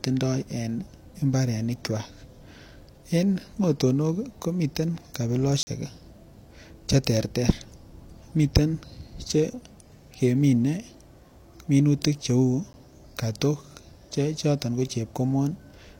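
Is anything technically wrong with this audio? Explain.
Yes. At 5.63 to 5.67 s and again at 12.73 s, just before "kotok chechoton ko", the speech drops out in a block of digital silence, 40 ms and then 10 ms long. The samples were zeroed, most likely because the output buffer wasn't filled in time, and the abrupt cut out and back in is heard as a short hole first, then a tick. On a waveform these appear as near-flat lines; a spectrogram shows blank vertical gaps.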